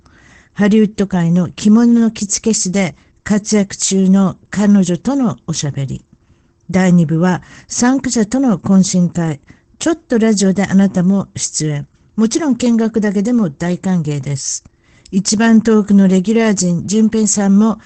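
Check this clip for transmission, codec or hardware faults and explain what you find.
One fault runs through the whole clip: Opus voice compression. The speech was coded by the SILK linear-prediction coder in wideband mode at a low bitrate, which fits about 12 kbps. At that rate the excitation is quantised coarsely, leaving the speech plainly muffled, hoarse and slightly robotic. On a spectrogram, energy stops at a flat ceiling near 8.8 kHz, with blurred, grainy harmonics beneath it.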